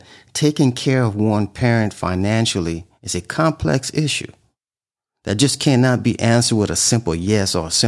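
No technical faults can be heard anywhere in this speech recording. At no point does anything in the signal break, drop or change in a way that would need a time marked against it.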